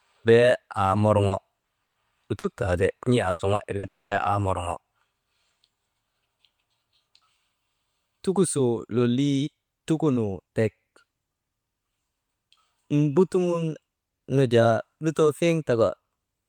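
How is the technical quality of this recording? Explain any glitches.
The speech has repeated network-loss glitches packed between 1.27 and 4.14 seconds.

Short concealed packet loss at 1.27, 1.59, 2.39, 3.55 and 3.79 s: about 40 ms each went missing, and the receiver extended the preceding sound to cover it, leaving brief smears or wobbles.

Burst of packet loss at 1.83 to 1.98 s and 3.31 to 3.42 s: 120 ms and 80 ms were lost. The concealed stretch fades out, and the first gap drops to silence before the speech picks up further along.

Long network dropout from 3.87 to 4.14 s: about 240 ms of audio is absent, nearly all of it heard as silence, likely from the stream stalling, before the speech resumes with that portion gone.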